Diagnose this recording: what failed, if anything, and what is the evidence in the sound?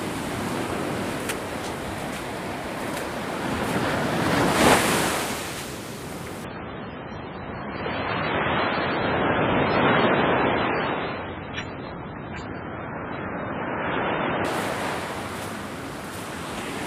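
The failure is at the network stage: an adaptive stream at a lower bitrate. From 6.45 s to 14.45 s the sound abruptly loses everything above 7.3 kHz, with no gap. Artefacts rise, which fits a drop from around 128 kbit/s MP3 to about 16 kbit/s. The player switched renditions when throughput fell.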